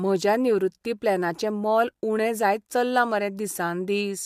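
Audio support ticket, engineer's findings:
No fault found on listening: speech passes with no audible dropout, distortion, noise or timing defect, so no component is implicated and no action is required.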